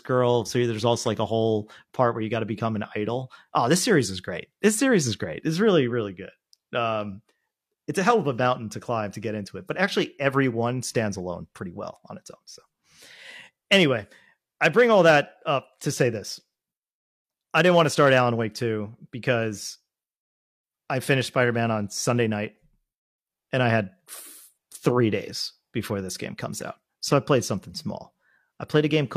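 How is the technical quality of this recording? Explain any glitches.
No glitches can be heard anywhere in the recording. The speech runs continuously, with no technical fault interrupting it at any point.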